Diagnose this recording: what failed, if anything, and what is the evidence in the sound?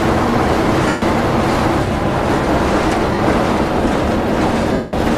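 The failure is lost LE Audio frames on the Bluetooth link, concealed by the LC3 decoder. Gaps appear at 0.88–1.02 s (140 ms), 3.14–3.19 s (50 ms) and 4.73–4.93 s (200 ms), lengths that fit whole 10 ms frames. With no data for those frames, the decoder repeats the last spectrum with randomised signs and fades it, so tonal content smears into noise and the longer losses sink toward silence.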